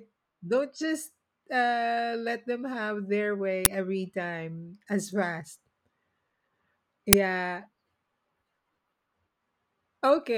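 At 3.65 s, between "let them have their" and "every time as fast", and at 7.13 s, an uninitialised buffer plays stale memory as a loud digital noise burst, 10 ms then 5 ms long, showing as tall waveform spikes and full-band vertical spectrogram stripes.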